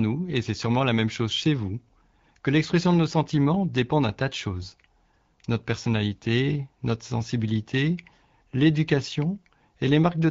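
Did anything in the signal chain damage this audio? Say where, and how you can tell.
No, nothing in the signal chain damaged this speech. The AMR wideband (HD Voice) codec path is working as intended at 12.65 kbit/s, and it leaves only the light coding traces expected at that rate.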